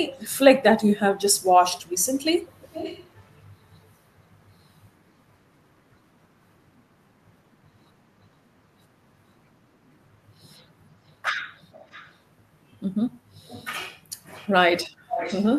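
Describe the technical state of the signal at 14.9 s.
An echo leak runs from 14.83 to 15.47 s, covering the 14.9 s point. A delayed copy of the speech, arriving about 0.46 s after the original and sitting roughly 10 dB below it, trails the direct sound. The likely cause is a far end playing the call over a loudspeaker whose echo canceller failed to fully suppress what its microphone captured, so that residue was transmitted back into the call.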